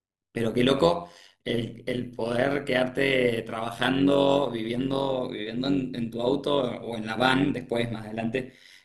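From start to finish the speech carries overlap-add ripple. The signal appears to have been split into windowed frames and rebuilt with an overlap whose windows do not sum to a flat gain, so the level dips and recovers once per frame. The swing is about 11 dB and repeats at around 100 Hz, which turns the voice into a metallic buzz with extra tones around it rather than a clean, steady tone.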